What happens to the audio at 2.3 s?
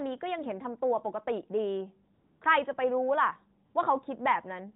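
AMR comfort noise fills 2.14 to 2.40 s. Speech frames stop for 260 ms. The decoder substitutes a smooth synthetic hiss for the real background.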